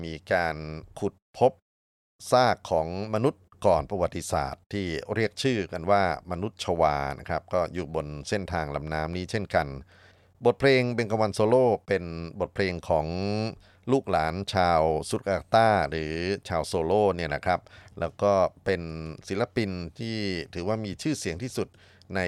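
Speech, with periodic USB or driver dropouts between 14.66 and 16.92 s. About ten evenly spaced ticks land every 0.25 s. Each one is a tiny gap, a small fraction of a millisecond, where samples are skipped rather than replaced with silence, so the waveform jumps and clicks. The fixed interval points to a background task that repeatedly stalls the USB bus or the audio driver long enough to drop a few samples.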